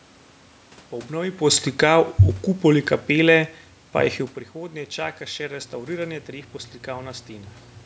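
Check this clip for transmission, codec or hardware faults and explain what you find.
Two system faults are present: the level control pulls the speech down early on, and a power-line tone appears near the end.

From 1.68 s to 4.3 s, just before "prihodnje čaka še", there is automatic gain falling. The automatic gain control judged the input too loud or its background noise too strong and stepped its gain down gradually, by about 4 dB in total. Because the whole signal is scaled, the speech and the room background sink together over those two and a half seconds rather than the talker alone getting quieter.

From 5.57 s to the end of the clip, right after "prihodnje čaka še", mains hum enters. Power-line current is leaking into the audio path, most plausibly through a ground loop or a nearby transformer. It is heard as a steady low 60 Hz tone sitting roughly 15 dB below the speech. It runs continuously under the last couple of seconds regardless of what is being said.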